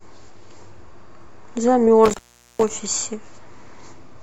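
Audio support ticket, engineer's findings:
Intermittent contact on the speech, dropout from 2.05 to 2.73 s, line open about 411 ms. Crackle at both edges, faint hiss in the gap. Probably a loose cable or plug briefly breaking the signal path. Reseat or swap the lead.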